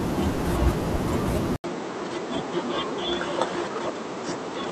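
At 1.56 s the speech breaks for 80 ms. It then returns duller, with nothing above 8.2 kHz, a few decibels quieter, and over a new faint noise floor. This likely means the input switched to a poorer device. The change lasts to the end.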